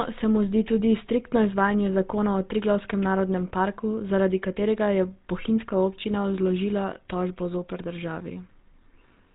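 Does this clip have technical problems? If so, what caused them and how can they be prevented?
Yes. GSM full-rate codec damage runs throughout the speech, plainly audible as buzzy, gravelly roughness. Regularly spaced excitation pulses cause it, and nothing passes above 3.8 kHz, which fits a 13 kbps coder. Prevent it by recording or transmitting through a wideband codec instead.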